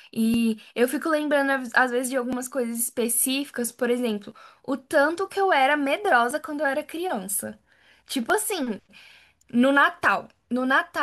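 Periodic USB or driver dropouts run from 0.34 s to 10.30 s, recurring every 1.99 s, about seven in all. Each time, a blocked bus or driver skips roughly 10 ms of speech entirely, so evenly spaced ticks cut through the sound.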